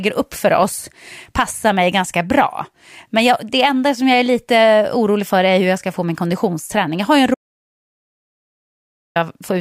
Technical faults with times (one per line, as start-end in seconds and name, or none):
7.34-9.16 audio dropout to silence